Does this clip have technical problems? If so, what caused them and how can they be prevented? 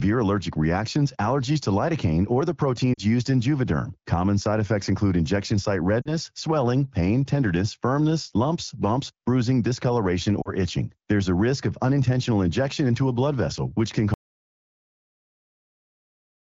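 Yes. Brief drops to near silence at 2.93–3.00 s, 6.01–6.11 s and 10.41–10.49 s are lost AMR speech frames: radio errors corrupted about 40 ms each time, so the decoder stretched earlier pitch and spectral shape with falling gain. Better radio coverage or stronger channel protection would prevent this. From 14.14 s to the end the audio drops to silence with no room tone, an audio dropout to silence likely caused by a lost input, failed link or accidental mute. Checking connections and monitoring input levels during recording would prevent it. The wideband AMR coding itself sounds clear, consistent with a rate around 12.65 kbit/s.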